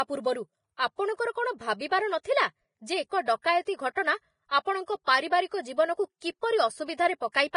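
From start to finish the speech sounds hissy and grainy, with nothing above 10.6 kHz and roughened, smeared consonant onsets, likely from heavy Vorbis compression at a rate near 28 kbps. Unlike a plain low-pass filter, the remaining treble is replaced by noise-like grain rather than simply dulled.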